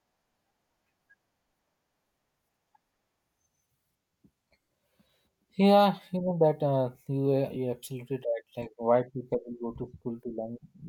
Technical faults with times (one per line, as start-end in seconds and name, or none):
7.55 lost LE Audio frames